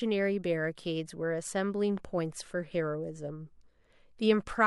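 A speech clip with one loud pop, from 1.98 to 2.00 s. It is a single sharp click or thump. It peaks a few decibels above the speech. The speech carries on underneath without a break. The pop is likely caused by a sudden voltage pulse entering the signal chain, as from a plug, a switch, static or a driver glitch. The circuits after that point shape the pulse into this brief burst of energy.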